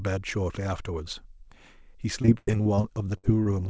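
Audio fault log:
2.22–3.47 s, repeated packet loss (robotic sound): ten holes patched by stretching prior sound, longest about 97 ms, so choppy chunks with pieces missing; spectrogram shows repeated smeared, frozen bands and breaks below its 8 kHz ceiling.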